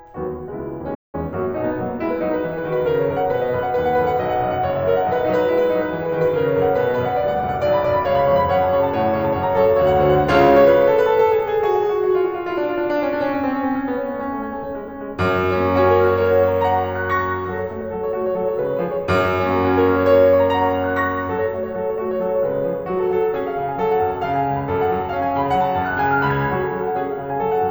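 This music clip drops out abruptly just under a second in: the sound cuts to silence at 0.94 s and stays silent until 1.15 s, a gap of about 190 ms, before the music carries on. This is a playback stall. The gap most likely came from the player running short of buffered data, or from its audio thread being held up, so nothing reached the output until playback recovered.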